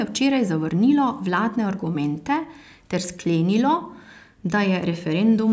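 No technical faults are audible.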